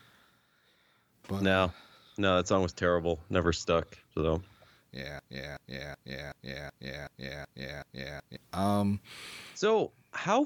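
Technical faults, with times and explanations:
5.19–8.37 s, broken-record loop: the playback or stream likely stalled and kept resending the last fragment it held, so a 376 ms slice of speech repeats exactly, back to back, eight times, and the speech that belonged in that stretch never plays.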